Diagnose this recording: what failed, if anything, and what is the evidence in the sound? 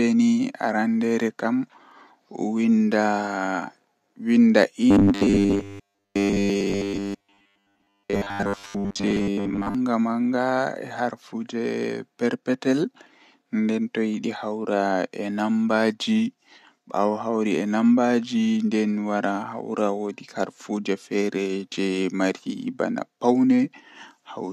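From 4.91 to 9.75 s the speech collapses into a rigid, metallic buzz fixed at 100 Hz, still loosely tracking the words: robotic sound from repeated short buffers. The stage is likely driver or buffer underrun, with a 10 ms block replayed in place of most of the missing audio.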